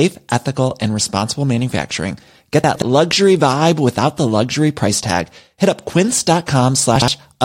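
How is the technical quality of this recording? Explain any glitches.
Two brief glitches. Chunks out of order at 2.64 to 2.82 s, then again at 6.96 to 7.08 s: a 60 ms slice of the speech plays two chunks late the first time, one chunk late the second, so each spot sounds jumbled.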